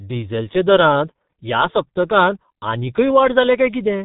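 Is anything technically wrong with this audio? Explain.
Yes. Throughout the speech, the sound is muffled and hoarse, with consonants smeared together and no brightness above about 3.8 kHz. This is G.723.1 codec damage, and it is heavy. The coder works in 30 ms frames and refreshes its model of the vocal tract only slowly, so fast changes blur. Its very low data rate, which fits roughly 6.3 kbit/s, leaves a rough, hoarse texture in place of detail.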